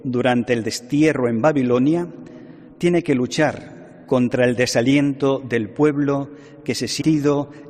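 A stream segment skipped shows up from 7.00 to 7.02 s, near the end of the audio. The sound breaks with a brief blip and resumes abruptly further along, as though a stretch of the programme had been cut out. That jump most likely comes from a segmented stream in which one chunk failed to arrive or decode and the player carried on from the following segment instead of stalling.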